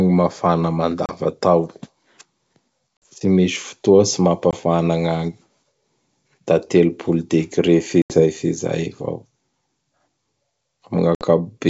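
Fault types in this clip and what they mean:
Packet loss on an ADPCM call: five hard-edged silent gaps of 20 to 80 ms. After each one the speech returns slightly distorted while the decoder resyncs.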